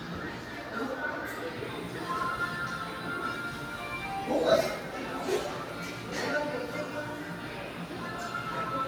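Everyday sounds that pump and thin throughout, with sustained parts and tails sinking by around 5 dB, because a noise suppressor applied to these sounds treats steady content as noise.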